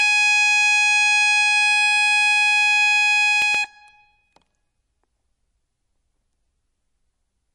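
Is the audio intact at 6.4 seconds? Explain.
No, not really. Like the rest of the music, 6.4 s carries what's likely MP3 compression at a low bitrate, around 48 kbps by the sound of it. The treble stops dead near 11.3 kHz, and starved frequency lines flicker frame to frame, leaving a watery, swirly smear.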